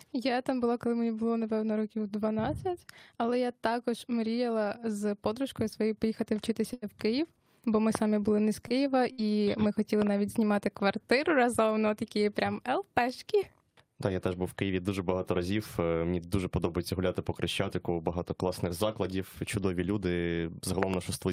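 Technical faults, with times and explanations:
6.73–6.85 s and 8.68–8.73 s, short stall from a late packet: the sound is held for about 89 ms, then 21 ms, and resumes with nothing lost. On a spectrogram this shows as flat, smeared harmonics.
7.95–7.97 s, 10.02–10.09 s and 20.83–20.96 s, loud pop: a single pop, then two double pops, about 20, 15 and 20 dB above the sound. They appear as thin vertical full-band spikes, likely from a plug, switch or driver glitch.
9.12–9.21 s, burst of packet loss: 57 ms of the last sound, held and fading, replaces the sound, then playback jumps ahead, skipping about 60 ms. This shows as a decaying smear, then an abrupt spectral discontinuity.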